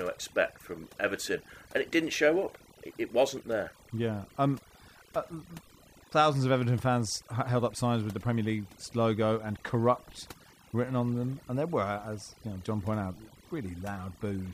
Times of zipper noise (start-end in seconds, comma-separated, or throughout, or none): none